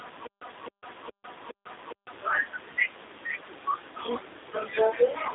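Speech running through a G.729 codec for its whole length: nothing above 3.8 kHz, and a slightly rough, synthetic texture that fits 8 kbit/s model-based rebuilding. Unlike a plain telephone band limit of 300 Hz to 3.7 kHz, the remaining band is itself audibly degraded.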